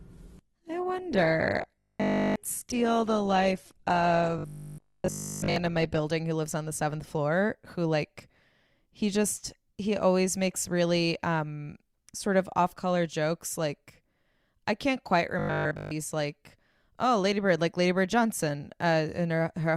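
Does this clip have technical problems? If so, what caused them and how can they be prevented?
Yes. From 0.0 to 6.0 s an adaptive stream starting at a low bitrate leaves missing treble and heavier artefacts, pointing to a low-bitrate Opus stream, until quality steps up cleanly. Prevent it by starting at a higher bitrate or pre-measuring bandwidth.

Robotic sound from repeated short buffers appears at 1.62–2.36 s, 4.38–5.56 s and 15.39–15.91 s. A rigid 50 Hz buzz replaces the speech almost entirely, likely from a 20 ms buffer being repeated. Prevent it with larger jitter buffers and steadier audio delivery.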